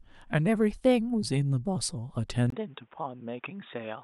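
At 2.50 s the speech cuts out for a brief 20 ms gap. It returns duller and boxier, and stays that way to the end. Nothing remains above about 3.7 kHz, so the crisp upper detail is gone. The level drops by roughly 5 dB. A new, faint background noise sits well below the speech. This is likely an input switched to a poorer device partway through, such as a narrowband headset microphone.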